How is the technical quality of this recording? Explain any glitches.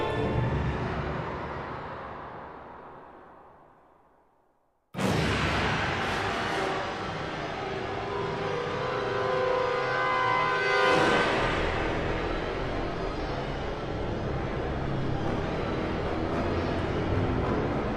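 There's one real problem: from 5.11 s to the end, a section at the wrong speed. Everything from that point runs at 0.822 times the original rate, so it drags and sits about three semitones lower, with tempo and pitch dropping together. It's likely a clock mismatch somewhere in playback or editing, where samples got read out slower than they were captured. You hear a sudden shift to a deeper, slower sound that never recovers.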